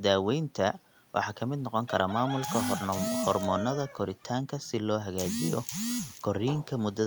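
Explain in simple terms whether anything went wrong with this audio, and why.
Nothing audible went wrong here.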